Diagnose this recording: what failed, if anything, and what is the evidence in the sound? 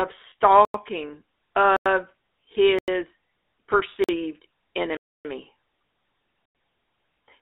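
The codec stage used GSM full-rate coding. Its pulse-driven vocal-tract model makes the speech buzzy and gravelly throughout, confined to roughly 250 Hz to 3.6 kHz.

In transmission, one lost GSM frame at 0.30 s was concealed by repeating the previous frame's settings. That leaves a 20 ms rough, metallic ring.

The driver or buffer stage underran, inserting blocks of digital silence at 0.65, 1.77, 2.79, 4.04, 4.97 and 6.46 s. Each is a hard-edged hole. Most last 93 ms, fitting a 4096-sample buffer; the others last 47 ms and 279 ms.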